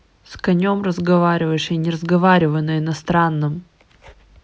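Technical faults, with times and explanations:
No technical faults can be heard in the clip.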